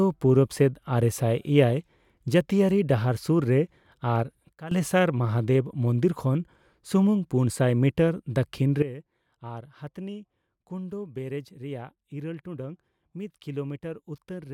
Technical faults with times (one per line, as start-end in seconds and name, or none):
4.53-4.71 sudden gain jump
8.82-14.53 sudden gain jump